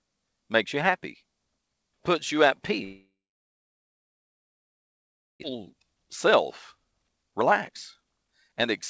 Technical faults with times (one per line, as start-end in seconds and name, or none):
2.84-5.46 long network dropout
5.55-8.67 jitter buffer speed-up